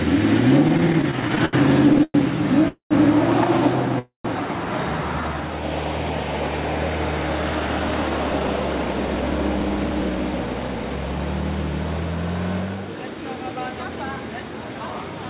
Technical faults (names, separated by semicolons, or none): repeated stalls (stutter); call audio freeze; jitter buffer speed-up